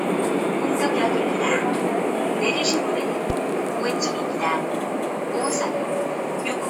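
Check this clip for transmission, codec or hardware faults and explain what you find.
One hardware-type fault turns up. At 3.30 to 3.33 s there's a single loud pop, a sharp click standing well above the sound, which keeps going underneath. It's likely a voltage spike from a plug, switch or static discharge getting into the signal chain.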